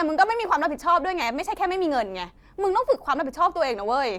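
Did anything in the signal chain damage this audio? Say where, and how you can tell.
No, nothing in the chain audibly damaged this speech recording, and no stage leaves a trace worth flagging.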